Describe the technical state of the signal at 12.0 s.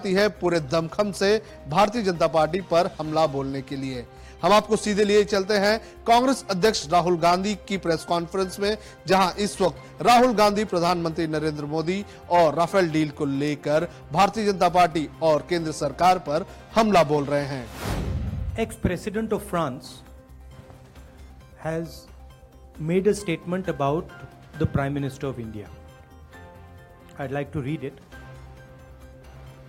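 At 12.0 s the signal is intact, with no dropout, distortion, noise burst or other technical fault at that point.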